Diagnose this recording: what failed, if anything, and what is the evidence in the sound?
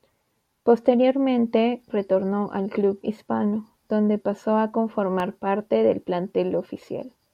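A loud pop sits on the speech from 5.20 to 5.22 s, a single sharp thump a few dB above the surrounding level. The speech continues beneath it. It is likely an electrical transient, such as a plug or switch, in the analogue wiring. The waveform shows one tall spike, and the spectrogram shows a thin vertical broadband stripe.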